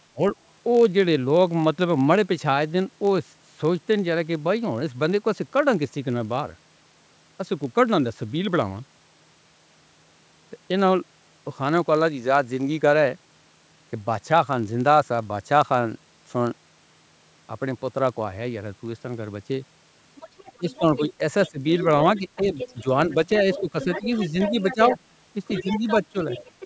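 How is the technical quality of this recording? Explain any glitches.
The recording has three kinds of fault: a steady buzz from a block size mismatch throughout, dips in the talker's level at four points, and a second voice leaking in over the last stretch.

Block size mismatch (padded), throughout: one stage writes blocks slightly shorter than the next stage reads, which fits 1024-sample reads, and pads the shortfall with zeros. Those tiny gaps repeat at about 46.9 Hz, giving a low buzz, and slow the audio by a factor of 0.999 at essentially unchanged pitch.

Speech suppressed in double talk, at 0.13 to 0.21 s, 20.58 to 21.6 s, 22.19 to 24.8 s and 25.63 to 26.15 s: the talker dips by up to about 20 dB in the first two spans and about 10 dB in the later ones. The likely cause is an echo canceller that turns down both voices when they overlap.

Other side's voice leaking through, from 20.16 s to the end: a second voice sits about 10 dB below the talker. 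It likely comes from loudspeaker playback that the echo canceller failed to fully remove from the microphone, and it overlaps the later dips. The call microphone processing also leaves nothing above 8 kHz.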